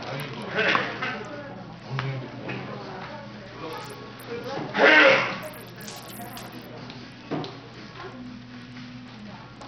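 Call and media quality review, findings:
Treble thin and flickering across the whole clip, with gritty noise and aliasing riding on the sound; likely Bluetooth SBC compression at a starved bit pool (damage fits roughly 64 kbps), upper sub-bands losing their bits, remaining bands coarsely quantised.

3.47 to 6.66 s: sound turns thin, bright, hissy, with top end about 11 dB hot at 10 kHz relative to 1 kHz; pre-emphasis left on, boost matching a 50 µs FM curve, de-emphasis stage not applied.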